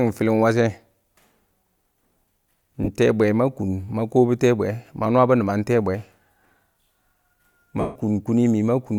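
Around 2.84 to 2.89 s there's a short burst of lost LE Audio frames, and the decoder papers over it by replaying the last spectrum with scrambled signs, so the sound smears into noise. At 7.80 to 7.96 s a longer loss smears and then fades away toward silence.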